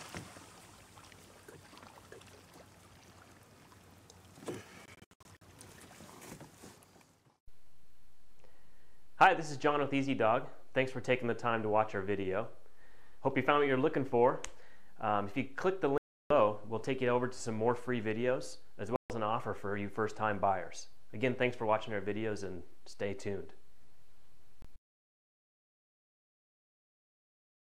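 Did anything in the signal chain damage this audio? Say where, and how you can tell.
Yes. The sound cuts abruptly to silence at 4.86–5.42 s (several short gaps, the longest about 70 ms), 15.98–16.31 s, 18.96–19.10 s and 24.62–24.65 s. Each time it resumes as though it had played on. This is likely a Bluetooth dropout: late wireless packets were discarded at playback.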